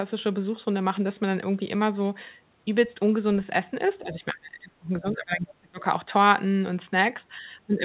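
A speech recording, band-limited to 4 kHz as the call codec path allows, which fits G.711. From 4.04 to 5.8 s the speech dips and breaks up, falling roughly 30 dB at its deepest. This is likely speech suppressed in double talk, with the echo canceller muting the talker.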